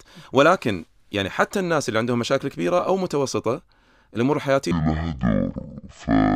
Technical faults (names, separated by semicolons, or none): section at the wrong speed